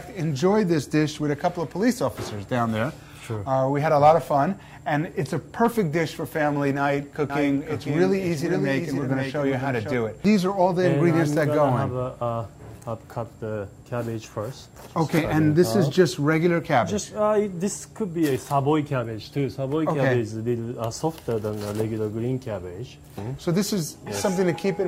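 A slower second path likely mixed the audio in twice from 7.30 to 9.94 s, creating a doubled audio track: a dry, quieter copy trailing about half a second behind.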